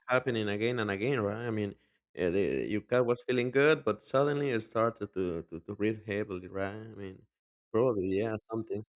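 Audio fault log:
No audible faults detected.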